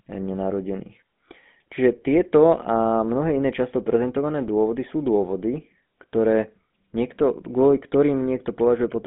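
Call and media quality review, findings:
GSM full-rate codec, entire clip. Speech limited to about 150 Hz to 3.6 kHz, nothing above 3.8 kHz; plainly audible buzzy, gravelly roughness. Vocal-tract model driven by sparse regular-pulse excitation; consistent with the 13 kbps GSM full-rate codec.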